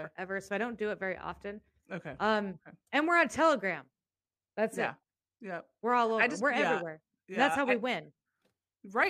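No technical faults can be heard in the recording at any point.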